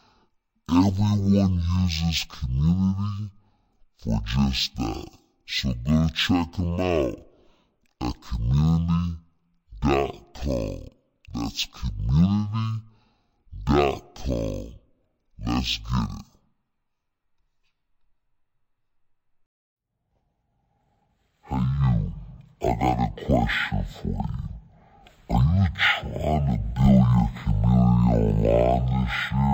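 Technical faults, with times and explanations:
throughout: stereo read as mono. Interleaved left and right samples are played one after another as one channel, so the speech runs at 0.5x speed and an octave (12 semitones) low. A spectrogram shows lowered harmonics plus a fainter mirrored copy in the upper half.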